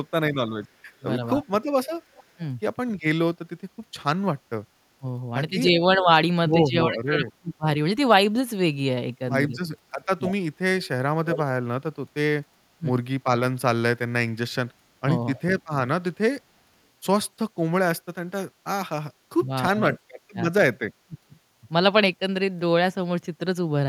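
From 0.0 to 2.41 s, an echo canceller that likely could not tell the near talker from loudspeaker echo while both sides spoke clamps the speech: this is speech suppressed in double talk. The speech dips by roughly 35 dB at worst, in pieces adding up to a few hundred milliseconds. Overlapping this, from 0.64 to 2.24 s, an echo leak, likely residual loudspeaker pickup that the canceller failed to remove, sends back a faint copy of the speech about 311 ms late and about 30 dB below it. From 4.98 to 7.67 s, double-talk suppression returns, pulling the speech down by about 30 dB for around a second in total, so it fades and breaks up. From 10.23 to 11.42 s, the echo leak is much stronger: the same 311 ms delayed copy sits only about 10 dB under the speech and is clearly audible as a repeat. Brief suppression dips of about 20 dB chop the speech at 12.78–12.86 s and 15.01–15.07 s. A short scrap of echo at 15.36–15.41 s follows, about 25 dB down. 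From 19.35 to 21.34 s, double-talk suppression cuts the speech again by about 30 dB, for roughly half a second in total.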